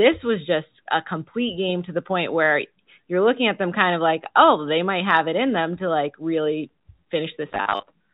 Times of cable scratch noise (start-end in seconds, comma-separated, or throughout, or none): none